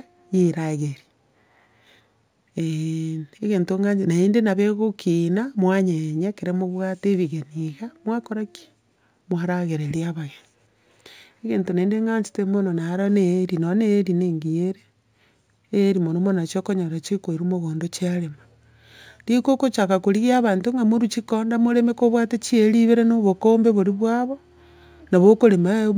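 Throughout, sibilants carry a faint metallic shimmer over a dulled top end. This is imaging from linear upsampling from 16 to 44.1 kHz, which left weak mirror images at 8 to 16 kHz.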